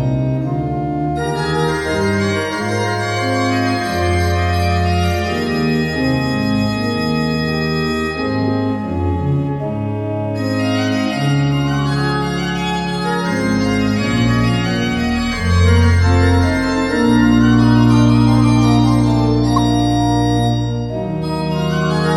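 At 19.56 to 19.59 s a single corrupt frame decoded produces a short glitch lasting about 24 ms. Damaged bits in one compressed frame were read as wrong gains and codes, so the decoder rebuilt that frame with energy placed at the wrong frequencies, peaking near -5 dBFS. On a spectrogram it shows as a narrow vertical smear of misplaced energy one frame wide; the waveform shows a brief, loud spike.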